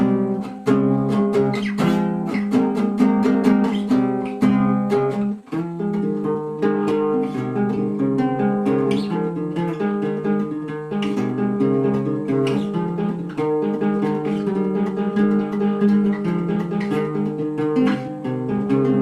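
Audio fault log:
Throughout: clock drift between sender and receiver, with the sender's clock running about 4 percent fast, so the receiver's buffer keeps overfilling and the timing never settles.
0.39 to 18.85 s: repeated timing corrections, as the receiver trims short pieces to keep pace with a 104 percent sender, in small edits at uneven intervals.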